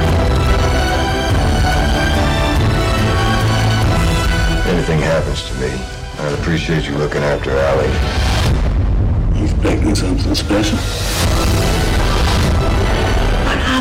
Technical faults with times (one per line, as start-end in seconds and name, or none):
0.00-13.80 hard clipping